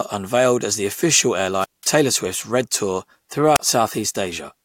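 Right after "unveiled as the official", at 1.59 s, there's a wireless microphone squelch dropout running to 1.87 s: the transmitter's signal fades, a quick burst of hiss comes up, then the receiver's squelch shuts the output for about 190 ms before the speech returns. It happens again after "red tour", from 3.54 to 3.60 s, much shorter this time, with the mute lasting only about 32 ms, so it's more of a clipped gap.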